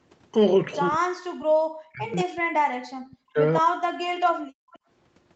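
From 0.89 to 3.39 s the speech dips sharply, about 40 dB at its deepest and for roughly two seconds in all, then drops again at 3.62 to 3.73 s and 3.92 to 4.39 s. This is likely speech suppressed in double talk: with both ends talking, the echo canceller attenuated the near talker along with the loudspeaker echo.

At 4.67 to 4.8 s the room sound briefly dips by about 22 dB for a fraction of a second. This is background gated by the echo canceller, which clamped the microphone hard while far-end audio played and released it moments later.

Inside that same window, 4.71 to 4.79 s, a faint delayed scrap of voice sits about 30 dB below the speech, trailing by 207 ms. This is likely an echo leak, where loudspeaker sound reached the microphone and slipped past incomplete cancellation. The audio carries nothing above 8 kHz.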